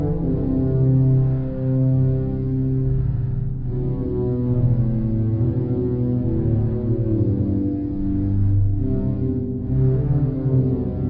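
The whole clip suffers from a wrong sample rate: everything runs at about one third of its proper speed and sits roughly 19 semitones low, so the sound is dragged out, murky and booming from start to finish. Speed and pitch are shifted together by the same factor, which is what happens when samples are played back slower than they were captured with no conversion in between. A three-to-one ratio like this fits 48 kHz material being played out at 16 kHz.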